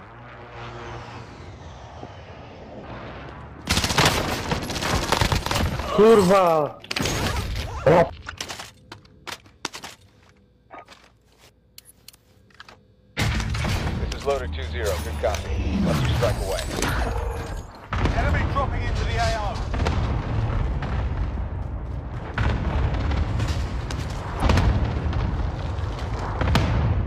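Compressed frames skipped at 2.84, 8.22, 12.68 and 24.38 s: missing or rejected frames make the audio jump ahead by roughly 0.3, 0.2, 0.2 and 0.1 s.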